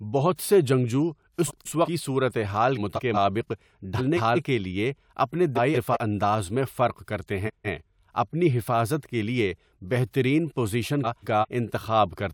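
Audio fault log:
1.47–1.88 s, 2.77–3.17 s, 3.98–4.39 s (right before "کے لیے اپنے"), 5.55–5.97 s (between "کے لیے اپنے" and "انداز میں فرق کرتے"), 7.46–7.85 s and 11.04–11.45 s: frames out of order. Each time, two neighbouring chunks of about 0.19 s play in swapped order, so the speech gets a garbled flutter. Nothing is lost, so the timing stays on track.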